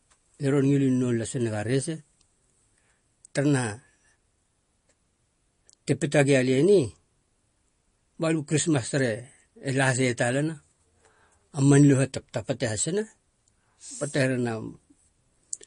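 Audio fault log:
throughout, MP3 compression: the encoder was likely starved of bits, with damage that fits a rate near 40 kbps. It removed everything above 10.6 kHz and discarded weaker frequency lines frame by frame, so the speech sounds dull and plainly watery.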